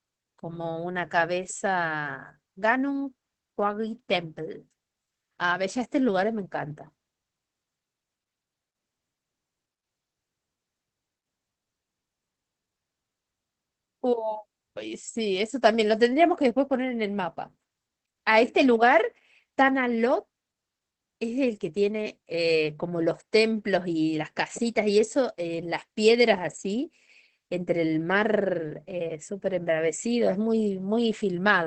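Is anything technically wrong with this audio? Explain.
Yes. Opus voice compression affects the whole speech clip. The codec appears to be running in its SILK linear-prediction mode at wideband, so nothing is present above about 8.3 kHz. The damage is plainly audible and fits a low bitrate of roughly 12 kbps: with so few bits the excitation signal is coarsely quantised, which makes the speech sound muffled, somewhat hoarse and faintly robotic.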